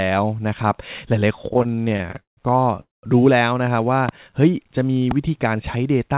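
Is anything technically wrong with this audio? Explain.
Yes. Repeated stalls (stutter) run from 1.49 to 2.40 s. Packets arrived late over and over, draining the jitter buffer, so the receiver stretched the speech through many short gaps of up to 175 ms each. The speech drags and stutters.

A call audio freeze follows from 2.80 to 3.06 s. It was likely a network hold-up: the last sound carries on briefly, then about 170 ms of silence falls before the speech resumes.

A loud pop lands from 4.09 to 4.11 s and another from 5.11 to 5.13 s. Each is a sharp click roughly 15 dB above the speech, likely from a voltage spike, with the speech carrying on underneath. The call path itself leaves nothing above 4 kHz, which fits G.711 A-law at 64 kbps.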